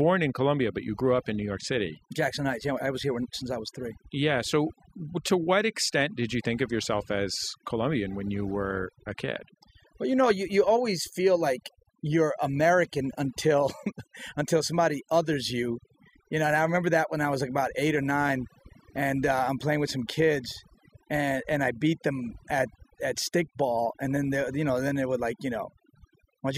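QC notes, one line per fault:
Throughout: overdone noise removal. The noise reduction was pushed far too hard, so any frequency band sitting close to its noise estimate gets pulled down or shut off entirely, and the softer parts of the speech are caught with it. Between phrases the background drops away, broken by twinkling specks where bands flicker on and off.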